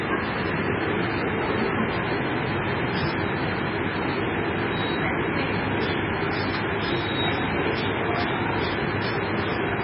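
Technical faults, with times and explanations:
Throughout: MP3 compression. Nothing is heard above about 5.4 kHz, so the top end is dull and closed in. The remaining sound is heavily damaged. It has a watery, swirling quality, and attacks are smeared. The likely cause is an MP3 encoder starved of bits, which fits a very low bitrate of around 15 kbps. Short of data, it cuts the treble at a fixed point. It also drops weak frequency detail, which flickers in and out between frames.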